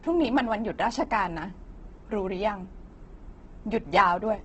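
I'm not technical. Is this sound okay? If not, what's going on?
No. Throughout the speech, the sound is dull and muffled with a rough, grainy edge, and nothing comes through above about 8 kHz. This is likely Opus compression squeezed very hard, which fills in missing detail with noise and trims the treble.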